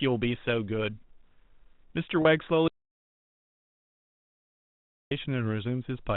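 At 2.22 to 2.25 s, a packet loss with pitch repetition occurs. About 30 ms of speech went missing, which points to one lost packet. The receiver filled the gap by repeating the last pitch period. It sounds like a brief, slightly held, buzzy tone.

From 2.68 to 5.11 s comes an audio dropout to silence. The speech cuts out mid-flow for about 2.4 s. The gap is silent, with no room tone. The likely cause is a lost input while silence kept being written.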